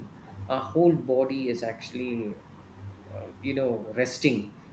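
No technical faults can be heard in this speech.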